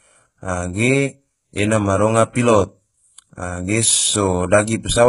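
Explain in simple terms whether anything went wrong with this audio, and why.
HE-AAC compression damage runs through the whole clip, from start to finish. The speech sounds heavily processed: the s sounds come out gritty and lispy, and nothing reaches above about 11.1 kHz. This is likely HE-AAC at a very low data rate. That kind of coding keeps only the lower part of the sound and fakes the treble by copying lower bands upward, so the rebuilt highs sound metallic and out of step.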